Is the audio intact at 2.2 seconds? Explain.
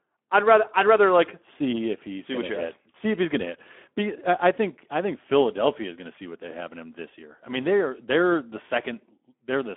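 No, at 2.2 seconds the speech is running through the same Speex codec damage that covers the whole clip. Speex is a CELP coder, and here it's clearly starved for bits. The excitation sounds thin and grainy, so the speech comes across hoarse and noisy, which fits a rate of roughly 11 kbps. It's also squeezed into a telephone-style band of about 250 Hz to 3.4 kHz, with nothing at all above 3.8 kHz.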